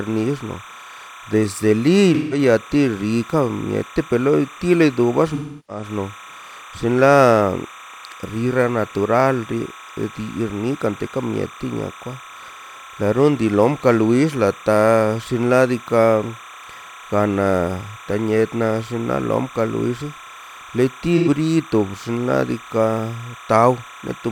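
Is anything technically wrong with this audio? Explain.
Yes, there are two faults in this speech recording.

Timecode bleed runs through the whole clip. Linear timecode from an adjacent track or cable has leaked in as a square wave switching between roughly 1 kHz and 2 kHz, at a rate that fits 30 frames per second, sitting around 20 dB below the speech. It sounds like a constant chirping warble underneath. A spectrogram shows steady bands near 1 kHz and 2 kHz with odd harmonics stacked above them, unbroken from start to finish.

AAC frame loss with concealment occurs three times: 2.14 to 2.38 s, 5.34 to 5.83 s, and 21.17 to 21.28 s. Encoded frames went missing, and the decoder patched the gaps by reusing the last good spectrum with randomised phase. The losses fit roughly 0.17 s, 0.34 s and 0.09 s of missing audio. They sound like smeared, noisy, phasey patches. On a spectrogram these appear as blurred, featureless smears, and on the waveform as a sagging envelope.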